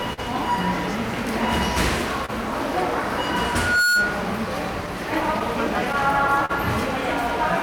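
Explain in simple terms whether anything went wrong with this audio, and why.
Three things went wrong here.

First, there's clock drift between sender and receiver. The sending device's clock runs a couple of percent slow compared with the receiving end, so audio arrives a little too slowly to keep up. The receiver's buffer keeps draining, and it has to patch things by repeating tiny bits of sound. You hear that as small, uneven timing hiccups scattered through the whole clip.

There are also short stalls from a late packet, at 0.13 to 0.20 s, 2.26 to 2.30 s and 6.45 to 6.51 s. Each time, the next chunk of audio wasn't there yet, so the receiver held the last sound for roughly 30 to 40 ms until it turned up, then carried on from the same spot. Nothing is actually lost. Instead, a moment of sound hangs on slightly too long, with a faint buzz or dip.

There is also a loudspeaker feedback squeal from 3.49 to 4.30 s. 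A microphone was picking up the speaker it feeds, and at one pitch, around 1.4 kHz, the loop kept reinforcing itself. That tone swells up over about a third of a second and ends up sitting a bit louder than the rest of the sound, like the classic whine you get at a badly set up PA, until it stops.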